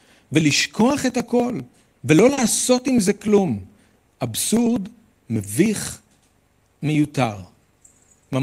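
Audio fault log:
0.11 s onward: periodic USB or driver dropouts. Something blocks the audio path every 0.099 s and skips a sliver of sound, giving regular ticks wherever signal is present.
2.33–2.39 s: short concealed packet loss. 40 ms of speech never arrived in time, so the receiver extended the preceding sound to cover it, leaving a brief smear.
2.37–2.47 s and 4.53–4.71 s: lost packet rebuilt from error correction. Low-bitrate copies carried in following packets stand in for 60 ms and then 100 ms, so the speech turns rougher and noisier without any gap.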